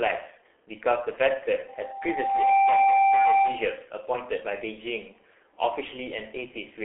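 Throughout, the speech has passed through the G.723.1 codec, squeezed into a telephone band of roughly 300 Hz to 3.4 kHz, with nothing above 3.8 kHz, at a data rate that fits its 6.3 kbit/s mode. The damage is heavy: dull, hoarse, with smeared consonants.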